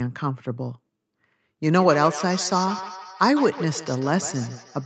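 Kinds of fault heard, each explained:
Feedback echo between two devices: from about 1.77 s to the end, the speech keeps coming back roughly every 150 ms, each pass thinner and more ringing. Another device is replaying this mic's audio into it, peaking about 13 dB below the speech.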